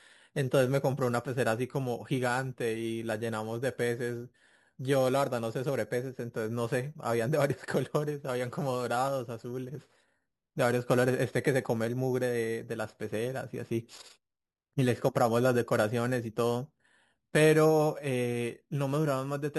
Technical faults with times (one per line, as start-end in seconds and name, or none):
0.00-19.58 imaging from sample-and-hold upsampling